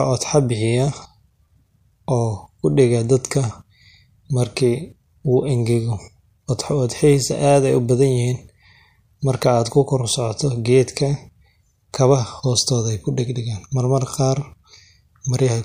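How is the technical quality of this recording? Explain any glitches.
The recording has one audible codec glitch, in the speech at 11.92 s. Pre-echo there puts a brief hiss, about 13 dB above the surrounding floor, just ahead of a sharp attack, consistent with a roughly 26 ms transform block that never switched to short blocks. A spectrogram shows a broadband smear preceding the onset, and the waveform shows noise before the transient.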